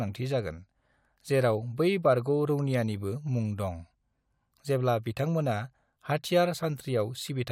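Listening to the speech recording, nothing stood out as a technical fault at any point.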